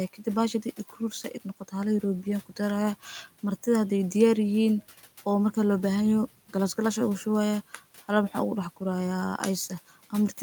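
Speech recording with one fault: speech cut by the noise suppressor between 0.63 and 0.96 s. The suppressor mistook soft parts of the speech for background and pulled them down by up to about 9 dB, around a tenth of a second in total, leaving them faint and swallowed. Unlike a dropout, the sound dims instead of going silent, and the room noise, about 25 dB below the speech, sinks along with it.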